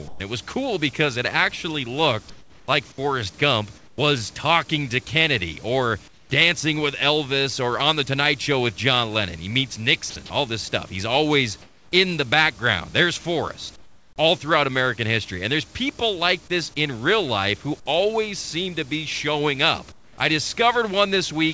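The sender's voice detector likely halted transmission during pauses in the speech, leaving the receiver to fill each gap with comfort noise in place of the background. This happens from 0.08 to 0.2 s, just before "it was cool because", from 2.3 to 2.68 s after "because it actually looked", from 3.78 to 3.98 s before "talking to", then at 6.08 to 6.3 s, 11.62 to 11.92 s, 13.76 to 14.18 s and 19.92 to 20.18 s. Each time the genuine room ambience gives way to a flat, textureless hiss, roughly 6 to 11 dB quieter, before normal sound returns.

From 10.10 to 10.16 s, the detector probably mistook a sound for background and stopped sending. This is sound dropped by the voice detector. For those 60 ms the sound vanishes under steady synthetic noise and returns once the detector triggers again. Throughout, the call path's bandwidth ends at 8 kHz, consistent with a G.722-type wideband codec.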